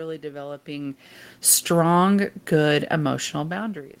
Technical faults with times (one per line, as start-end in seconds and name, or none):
none